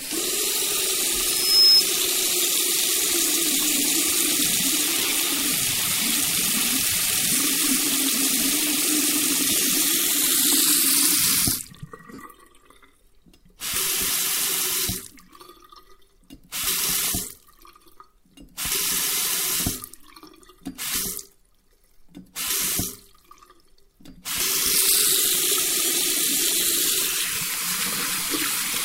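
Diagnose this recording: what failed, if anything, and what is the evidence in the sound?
A loudspeaker feedback squeal occurs in the acoustic path between microphone and loudspeaker, from 1.22 to 1.85 s. A single tone at 5.2 kHz swells over roughly 0.4 s until it sits about 10 dB above the programme. The microphone was picking up its own loudspeaker, and at 5.2 kHz the loop gain exceeded unity, so that frequency regenerated on each pass. It stops at 1.85 s, when the loop was broken or the gain dropped.

Lost LE Audio frames point to the Bluetooth LE Audio link and its LC3 decoder. Dropouts occur at 4.98–5.12 s, 9.51–9.65 s, 12.14–12.19 s and 25.86–25.91 s. The first two spread about 82.5 ms of loss over 135 ms, in runs of around 20–30 ms. The last two are single 45 ms gaps, which fits six 7.5 ms frames. In each, the sound turns into a brief noisy smear, because the decoder refills missing frames with the previous spectrum under randomised signs and fades it.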